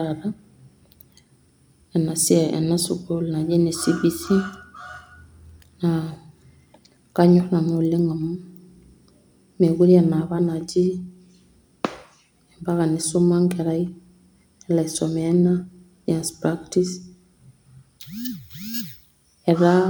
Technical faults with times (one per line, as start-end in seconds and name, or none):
none